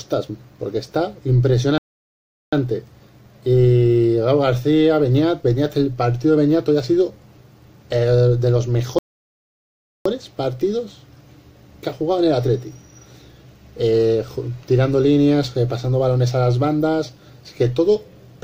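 At 1.78 s the sound cuts off dead for about 0.75 s, resuming at 2.53 s; a second playback stall runs from 8.99 to 10.06 s, about 1.07 s. The likely cause is the player starving for data. Each gap appears as a flat waveform and a blank spectrogram column.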